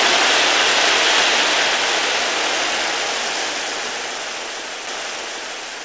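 A CD skip at 4.87 s: a knock or a flaw in the disc made the laser jump to another turn of the spiral, so the player muted for a few milliseconds and resumed from a different point. It is heard as a short tick followed by an abrupt jump in the sound, with no smooth transition across the join. The whole clip also stops sharply at 8 kHz, which fits its passage through a wideband call codec such as G.722.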